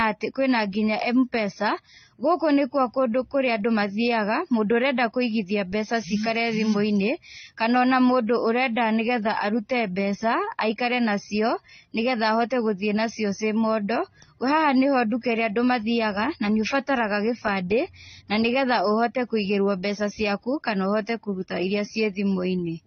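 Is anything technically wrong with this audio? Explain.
Yes. Throughout the speech, nothing survives above 6.3 kHz, and the artefacts of both codecs sit on top of each other. The likely cause is transcoding between lossy codecs, which fits a low-rate AAC-LC encode re-encoded as HE-AAC. The second codec spent bits on the first one's damage, added its own, and kept the lowest cut-off.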